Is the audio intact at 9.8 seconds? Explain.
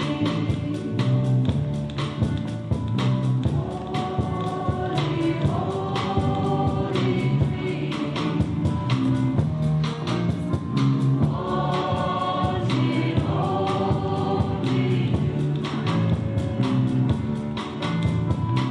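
No. A drift correction step runs from 9.37 to 11.27 s: playback speeds up 5.4%, raising pitch about 91 cents, likely a clock-matching resampler adjusting its rate.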